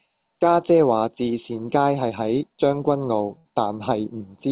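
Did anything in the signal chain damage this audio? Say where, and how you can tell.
Yes. A short stall from a late packet occurred at the network/jitter-buffer stage, at 3.38–3.47 s and 4.18–4.22 s. The buffer ran empty, so the last sound was stretched for 67 ms and 27 ms and nothing was lost. A spectrogram shows frozen, smeared bands, and the waveform shows a repeated cycle.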